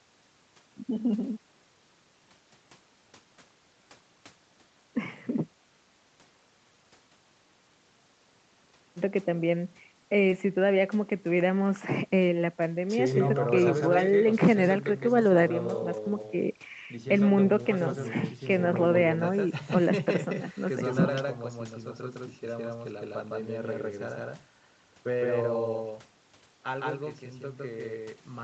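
From start to finish, the speech is carried twice, most likely because a second, slower capture path or a misaligned edit left two copies in the mix. This doubled audio track puts a full-band duplicate roughly 150 ms behind the original at about the same level. It has no decay or room colour, so each syllable is followed by a hard, slap-like repeat, and the sound stutters and blurs rather than sounding reverberant.

At 10.30 to 10.32 s, about 10 ms of the call failed to reach the decoder in time. This is a short concealed packet loss: the receiver filled the hole with about 11 ms of extrapolated sound, continuing the last pitch or shaped noise, then blended back into the real signal. The result is a fleeting smear or wobble at that point. The call path's band limit leaves nothing above 8 kHz.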